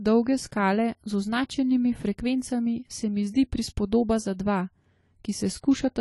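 Throughout, the speech carries plainly audible codec damage, likely AAC compression at a low bitrate, which fits roughly 32 kbps. Nothing sounds above 11.5 kHz, so sibilants turn dull and smeared, and a spectrogram shows a flat ceiling with all energy gone above it.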